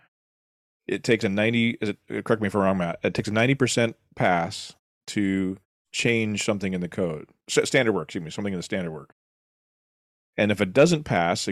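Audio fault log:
No faults are audible in the speech. The background falls to silence in the pauses and returns in time for each phrase, with nothing lost at the edges.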